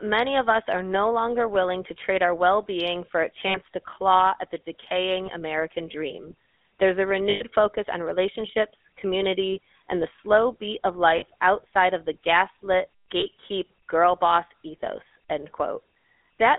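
The whole recording carries the GSM full-rate codec: a narrow line band from about 250 Hz to 3.6 kHz and a persistent buzzy, gravelly texture, which fits the 13 kbps full-rate coder. The speech is rebuilt from a vocal-tract model excited by a sparse, regularly spaced pulse train, so the damage is plainly audible. That grainy buzz sets it apart from the swirly, watery smearing of transform codecs like MP3.

Within that, lost GSM frames appear at 3.48 to 3.57 s, 5.26 to 5.30 s, 7.30 to 7.43 s, 9.52 to 9.57 s, 11.18 to 11.24 s, 13.20 to 13.26 s and 16.26 to 16.28 s. They last between 20 and 100 ms, the longest at 7.3 s. Each gap is concealed by repeating the last good frame, so you hear a brief rough, metallic ring instead of a click or a hole of silence. That held tone marks them as concealed frames rather than simple dropouts.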